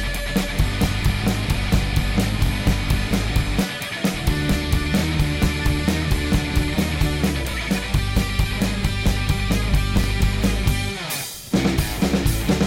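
The audio stutters at regular joins, at 2.46–2.49, 4.99–5.01, 7.51–7.54 and 10.04–10.07 s, where about 25 ms plays twice. That's classic overlapping chunks: each 2.5-second block starts slightly before the previous one ended, so the overlap repeats at every seam.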